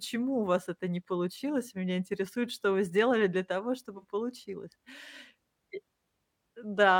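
An AAC frame loss with concealment hits at 3.98 s, just after "вы сделали для того": 43 ms of coded audio went missing, which fits one dropped frame, and the decoder rebuilt it from the last good spectrum, leaving a smeared, noisy patch until 4.05 s.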